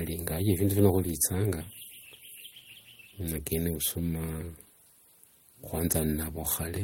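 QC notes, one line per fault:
No faults were heard anywhere in the speech. Nothing here calls for a QC entry.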